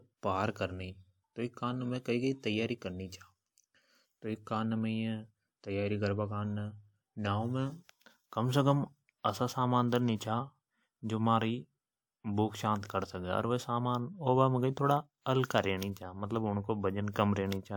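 Pre-echo appears twice in this speech. At 10.17 s, just after "असा समान धर नि", a short hiss runs for about 41 ms ahead of a sharp onset, and at 15.22 s, after "होबा मे थोड़ा", the same happens over about 46 ms. The codec spread its quantisation noise across a whole transform block, so noise meant for the loud attack leaked into the quiet lead-in, softening it. Unlike reverb or echo, the smear comes before the attack, not after it.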